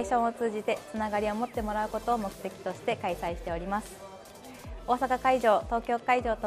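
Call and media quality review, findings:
No anomalies noted on listening; nothing in the recording stood out as a fault.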